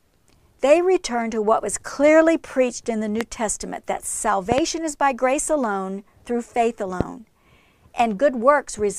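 A stray voltage step, likely from a plug, switch, static discharge or driver glitch, gets added to the signal three times, and the downstream circuitry shapes each into a loud pop standing well above the speech, roughly 15 dB over it. The first single pop runs from 3.21 to 3.23 s. A double pop follows from 4.52 to 4.60 s, just before "is by grace alone". A third single pop sits at 7.01 to 7.03 s, right after "grace alone through faith". Each time, the speech continues underneath.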